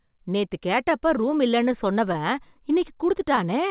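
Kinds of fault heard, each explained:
Clock drift between sender and receiver: Small timing hiccups recur at uneven intervals throughout, where the sound briefly stretches or stutters. The sender's audio clock runs about 2 percent slower than the receiver's, so the receiver's jitter buffer keeps draining. To keep playback going, the receiver repeats short pieces of sound.
Scattered short gaps: Between 0.08 s and 3.39 s, about ten brief ticks and smears are spread across the speech, the longest lasting around 15 ms. Together they account for roughly a tenth of a second, only a few percent of that stretch. Packets were lost or arrived late one at a time, and the receiver filled each hole by extending the last sound, so no stretch of sound goes missing, even on this band-limited call line with nothing above 4 kHz.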